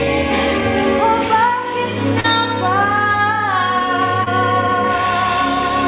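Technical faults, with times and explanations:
2.20–2.26 s and 4.24–4.28 s, short concealed packet loss: about 40 ms, then 20 ms, of audio never arrived in time, and the receiver filled each gap by extending the preceding sound before crossfading back. Each gap is heard as a brief smear or wobble. On a spectrogram, harmonics or noise run unnaturally flat across the gap, and the energy is already capped at 4 kHz by the G.711 call path. The waveform shows repeated cycles where the sound was voiced.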